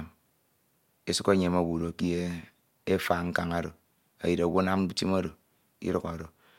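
Nothing in this recording of speech stands out as a technical fault, so there's nothing here to pin to a moment or explain.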